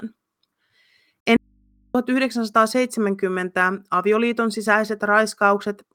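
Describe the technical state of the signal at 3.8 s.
At 3.8 s the speech signal is intact, with no technical fault audible at that moment.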